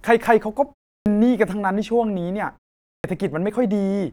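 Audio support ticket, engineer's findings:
Speech resumes abruptly out of silence with its opening sounds missing, at 1.00 s (about 59 ms lost, after a 0.34 s pause) and at 2.97 s (about 71 ms lost, after a 0.47 s pause). Clipped start after a pause. Probable component: output device power management. The device sleeps during silence and needs time to wake and relock, so the first part of each new phrase is swallowed.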